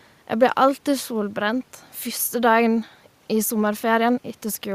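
Nothing stood out on listening to this speech recording, apart from faint room noise sitting about 39 dB below the speech.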